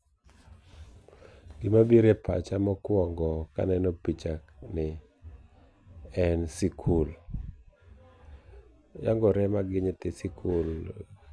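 Nothing in this speech recording stands out as a technical fault; it just runs along without any glitch, dropout or oddity worth pointing to.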